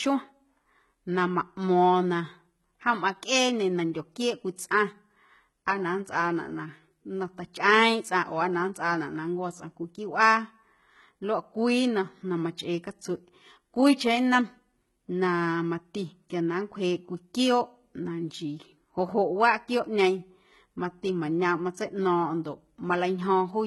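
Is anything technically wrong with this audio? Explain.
Yes. Throughout the speech, the upper band sounds likely rebuilt by HE-AAC compression, copying lower bands upward at a very low bitrate near 16 kbps. Nothing sits above 11.8 kHz, and s sounds turn heavily gritty and metallic.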